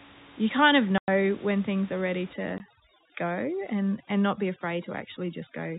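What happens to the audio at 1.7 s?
Nothing goes wrong at 1.7 s; the audio is intact there.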